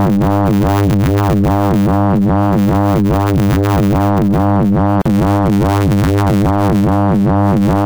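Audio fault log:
Throughout: block size mismatch (truncated). There's a steady 100 Hz buzz under everything, and the audio runs about 1.09 times too fast while keeping roughly its normal pitch. One stage is handing over longer blocks than the next one reads, so the tail of every block gets dropped. Those regular cuts, about a hundred a second, make the buzz, and the missing slices shorten the sound by that 1.09 ratio.
5.02 to 5.06 s: gap at a join of encoded pieces. A 39 ms gap opens in otherwise continuous sound, with edges smeared by the codec so the silent part is shorter. Afterwards the sound picks up right where it left off. It's the classic sign of separately encoded pieces butted together untrimmed. The padding at the end of one piece and the start-up delay at the head of the next both stay in, leaving a dead spot.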